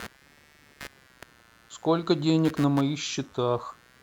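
Computer activity noise runs through the whole clip. Processor and hardware load disturb the shared audio ground, adding a faint buzzing chatter, pulsing about a hundred times a second, well below the speech.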